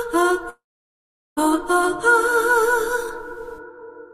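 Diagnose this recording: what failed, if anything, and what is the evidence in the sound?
A call audio freeze, most likely from the network side. At 0.49 s the sound stalls, the last bit smears into a fading buzz, then about 0.77 s of near-silence until 1.39 s. It picks up exactly where it stopped, nothing lost, just running about 0.87 s late.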